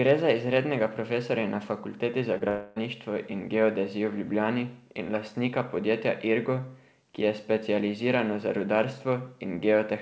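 At 2.38 to 2.42 s there is a brief smear, a wobble where the speech seems to stretch instead of moving on. This is short concealed packet loss. About 20 ms of the call arrived too late to decode, and the receiver covered the gap by carrying the preceding sound forward for roughly 24 ms before blending back into the real signal. The audio band stops at 8 kHz, as G.722 does.

Moments later, from 2.48 to 2.78 s, the speech turns into a drawn-out buzzy, hissing continuation that fades over about 0.28 s. It never falls to full silence. Normal speech resumes at "in geodezijo," with the intervening material absent. This points to a long network dropout, where nearly 0.3 s of packets likely never arrived. The decoder extended the last sound for the whole gap, and the original content of that stretch was lost.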